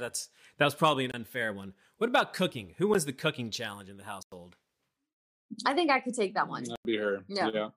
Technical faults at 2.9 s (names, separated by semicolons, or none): block of digital silence